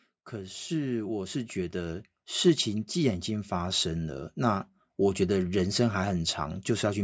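Speech heard through a call's microphone processing, with nothing above 8 kHz. The fault is automatic gain rising. From 0.3 s to 4.4 s, the level climbs by about 10 dB. Voice and background swell together. The gain control judged the input too quiet and raised its gain gradually.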